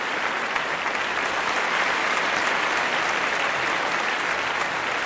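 Nothing stood out on listening; the audio carries the band limit of a G.722 call path, with no content above about 8 kHz.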